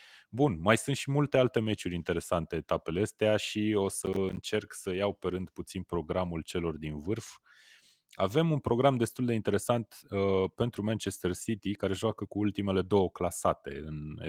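From 4.02 to 4.43 s, after "etapele astea și o" and before "să iau pe rând", processor overload crackle appears. About ten buffers of around 10 ms miss their deadlines and drop to silence. The waveform shows hard-edged gaps, and the spectrogram shows broadband vertical streaks, heard as gritty tearing over the speech.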